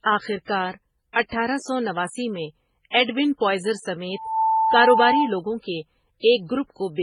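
Across the whole recording the speech carries two layers of coding damage together: smeared, warbly detail beneath a second codec's own texture, with nothing above 23.2 kHz. This points to transcoding between lossy codecs, likely a low-rate MP3 pass later re-encoded as HE-AAC.

At 4.13 s, just after "نواسی میں ایڈوِن پوائزر", a loudspeaker feedback squeal begins. The microphone re-amplifies its own loudspeaker output at 889 Hz, where loop gain exceeds one. The tone swells over a few tenths of a second to about 5 dB above the speech, lasting until 5.37 s.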